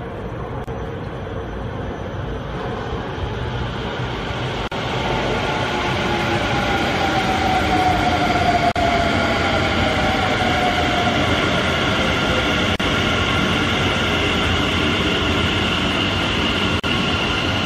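At 0.64 s the sound drops out for 33 ms, then resumes where it stopped. The same break returns at 4.68, 8.72, 12.76 and 16.80 s, each about 40 ms long, spaced 4 s apart. This is a gap at a join of encoded pieces. Each piece was encoded on its own and butted together untrimmed. The encoder's start-up delay and last-frame padding remain as silence. The edges are smeared, heard as a regular stutter.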